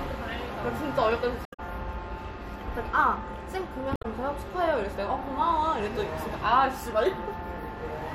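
A short glitch cuts into the audio from 1.43 to 1.60 s, and another from 3.93 to 4.05 s. Both come from damaged data in the compressed stream: the decoder misreads corrupted frames, loses sync, and emits a brief glitch while hunting for the next valid frame header.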